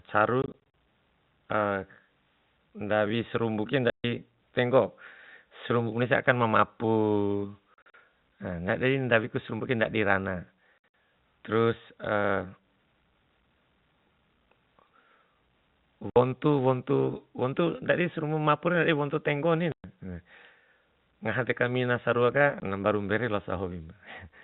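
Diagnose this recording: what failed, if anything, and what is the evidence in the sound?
The speech drops out in short dead holes with hard edges at 0.42–0.54 s, 3.9–4.04 s, 7.74–7.94 s (just before "na ndadi ndawi kai"), 10.78–10.84 s (right after "sarumbu ke ndadi rana"), 16.1–16.16 s, 19.72–19.84 s and 22.6 s (just before "na mbaru mbere"). The gaps come in steps of 20 ms, up to 140 ms in a run, which fits 20 ms packets. This is packet loss filled with silence at the network stage: the receiver played digital silence in place of the lost packets, with no concealment, across a G.711 telephone path.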